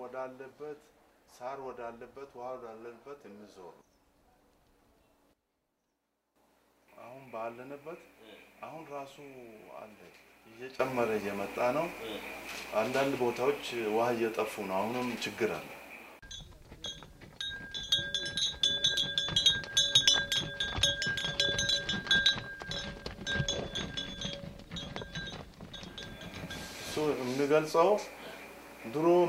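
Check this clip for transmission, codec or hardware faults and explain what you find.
Two sudden gain jumps appear. The first, at 5.33 s, drops the level by about 12 dB until it returns at 6.36 s. The second, at 10.8 s, raises it by about 14 dB and holds to the end. The likely cause is a digital gain setting or bit shift applied between adjacent samples with no ramp. Because the change is applied to the whole signal, the sound and its background noise step down or up together, instantly rather than fading.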